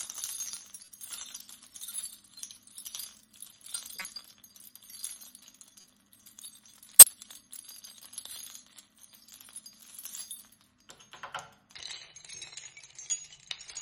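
Corrupt frames are decoded at 0.85–0.88 s, 3.95–4.05 s, 5.81–5.84 s and 6.97–7.11 s. Each time, a few damaged compressed frames play anyway, misplacing energy in frequency. The first and third are faint blips, the second louder, the last a strong burst.

From 11.75 s to the end, the section is at the wrong speed, running at 0.62 times normal. Pitch drops roughly seven semitones along with the slowdown, so the sound turns deep and sluggish, likely from playback against a mismatched clock.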